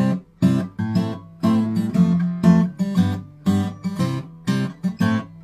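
Listening through the clip, nothing stood out as a technical problem at any point.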